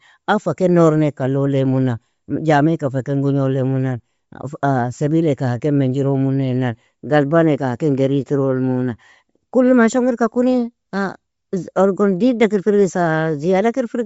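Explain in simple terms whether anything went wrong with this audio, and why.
Something went wrong in the transmission. The speech was most likely squeezed by Bluetooth LC3 compression, the codec used by newer Bluetooth earbuds and headsets, which chops sound into 10 ms slices and throws away detail to save data. The damage is plainly audible from start to finish: nothing above about 7.7 kHz survives, so the speech sounds dulled, with a breathy, grainy edge.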